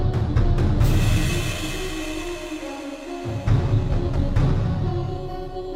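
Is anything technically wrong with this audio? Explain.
Yes. Periodic clock jitter runs through the whole clip. Interference at a single frequency, around 4 kHz, is modulating the converter's sampling clock, so every component of the sound gains sidebands spaced about 4 kHz above and below it. Because timing error matters more as frequency rises, the higher components carry the strongest sidebands. The result is a rough, metallic edge riding on the sound, which disappears whenever the signal falls silent.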